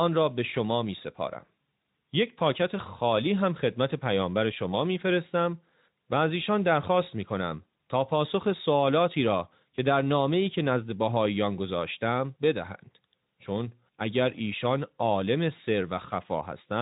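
No technical faults are audible.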